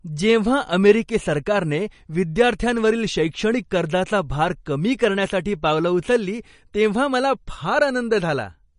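From start to finish the speech has a watery, swirling quality, with s sounds turned into metallic chirps and consonant attacks smeared. Nothing is present above 10.5 kHz, so the top end is cut off sharply. This is plainly audible damage from MP3 compression, likely at a low bitrate around 40 kbps, where the encoder runs short of bits, removes the treble at a fixed frequency and switches weak frequency lines on and off between frames.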